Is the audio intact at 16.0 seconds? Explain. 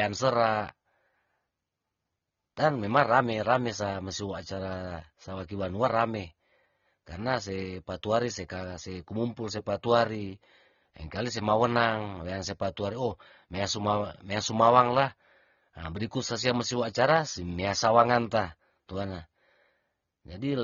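No. At 16.0 seconds the speech sounds dull and smeared, with a warbling, fizzy texture on sustained sounds and sibilants, and the damage is plainly audible there as it is across the whole clip. The likely cause is AAC compression: an AAC-LC encoder at a low rate, one that fits about 24 kbps, quantises the spectrum coarsely, pulls the top end down and leaves gaps that smear the sound.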